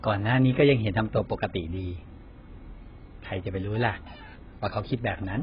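Heavy AAC compression, likely at a very low bitrate around 12 kbps, runs throughout: the speech has nothing above 5.2 kHz and sounds dull, smeared and warbly.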